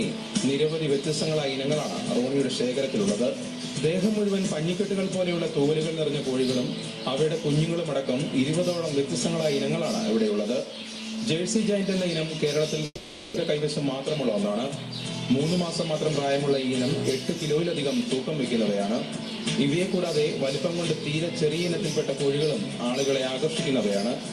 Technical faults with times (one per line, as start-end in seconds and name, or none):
12.85-13.38 long network dropout